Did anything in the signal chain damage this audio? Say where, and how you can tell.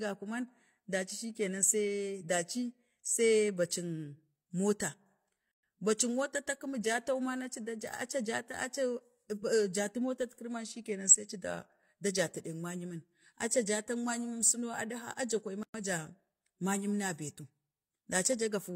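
Yes: a codec-stage gap at a join of encoded pieces. Untrimmed encoder delay and padding silence the speech at 5.51 s (117 ms) and 15.63 s (112 ms), just before "man ja".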